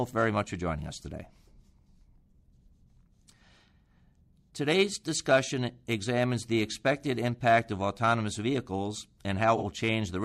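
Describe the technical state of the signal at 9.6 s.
AAC frame loss with concealment, 9.57–9.64 s: a 43 ms gap, fitting one lost frame, is refilled from the preceding spectrum, sounding smeared and noisy; the spectrogram shows a blurred, flattened patch.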